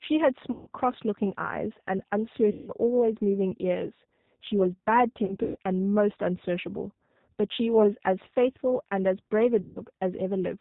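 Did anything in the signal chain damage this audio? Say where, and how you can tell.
Yes. The codec stage is at fault throughout: this is G.729 coding at 8 kbit/s, and its damage is plainly audible. Nothing above 4 kHz survives, and the speech sounds rough and slightly synthetic because it is rebuilt from a vocal-tract filter, pitch predictor and sparse pulses.

The network stage adds VoIP packet loss concealed by the speech codec at 0.52–0.69 s, 2.52–2.72 s, 5.25–5.58 s and 9.61–9.89 s. About 150 ms is lost each time, 180 ms scattered across 300 ms in the third. The decoder stretches the last pitch and filter into a fading buzzy tone or coloured noise, and the speech stays weakened while its state recovers.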